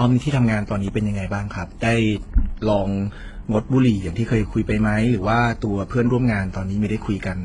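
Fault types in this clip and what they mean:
Transcoding between lossy codecs: stacked compression artefacts throughout the speech, most likely from several lossy passes, with a spectrogram showing nothing above about 10.9 kHz and smeared, patchy high bands.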